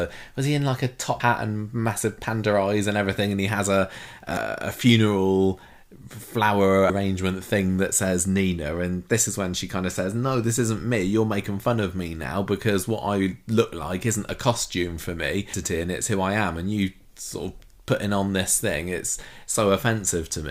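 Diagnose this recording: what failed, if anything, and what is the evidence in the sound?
Codec-side trouble: damaged data in the compressed stream gives quick blips at 1.2 s, 4.34–4.37 s, 6.86–6.90 s and 15.54 s, where the decoder loses sync on bad frames.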